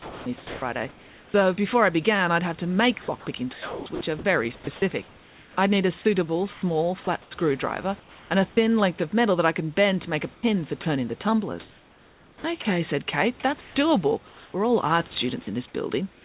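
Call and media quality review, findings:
Sound chopped by the voice detector, 0.00–1.34 s (before "before I began I'd"), 3.02–5.57 s (between "I'd have to make" and "I'd need a suitable"), 10.34–12.65 s. Likely sender VAD toggling repeatedly, with roughly 1 s per stretch swapped for comfort noise. Repeated holes, unlike one clean dropout.

Comfort noise in place of the background, 6.53–8.30 s (between "I'd need a suitable" and "and a thin length"), 13.61–14.54 s, 16.13 s to end. Likely DTX pause filled by synthetic noise: steady and featureless, about 5 dB quieter at the end.

Sound dropped by the voice detector, 7.04 s. Likely VAD misreading sound as background: about 20 ms of sound replaced by steady noise, with no click or gap as in packet loss.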